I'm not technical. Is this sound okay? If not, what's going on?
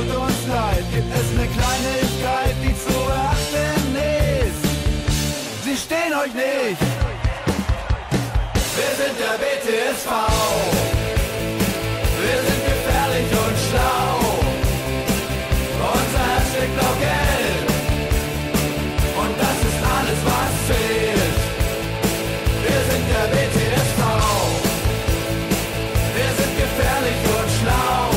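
Yes, it's fine; there's nothing wrong to hear.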